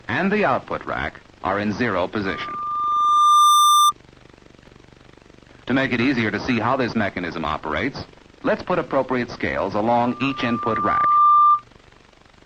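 Loudspeaker feedback squeal swells at 2.26 to 3.92 s and again at 9.98 to 11.63 s. A 1.2 kHz tone builds for about a second and a half, then towers over the sound.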